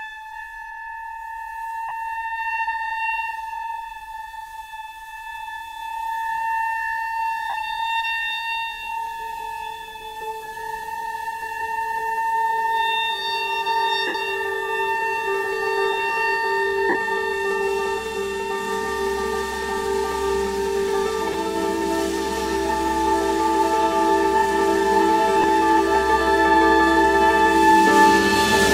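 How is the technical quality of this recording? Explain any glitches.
Six short dropouts from lost LE Audio frames, at 1.89–1.91, 7.50–7.54, 14.07–14.15, 16.89–16.95, 21.33 and 25.42–25.44 s. The LC3 decoder concealed each gap by repeating the previous spectrum with randomised signs, giving a brief noisy smear. The 68 ms gap at 14.07 s fades; lengths in 7.5 ms steps suggest LC3 frames. Light coding shows at most faintly.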